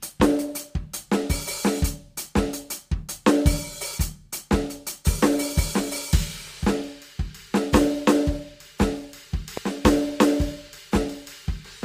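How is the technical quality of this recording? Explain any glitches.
One glitch stands out in the music: a single loud pop from 9.57 to 9.59 s, about 20 ms long. It is most likely a sudden voltage step or pulse entering the signal chain, from a plug being seated, a switch, a static discharge or a driver hiccup. The following circuitry shapes that pulse into a short, sharp transient. It hits roughly 10 dB above the surrounding level as one hard pop, with the music continuing uninterrupted beneath it.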